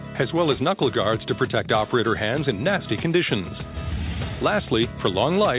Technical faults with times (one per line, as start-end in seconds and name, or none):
none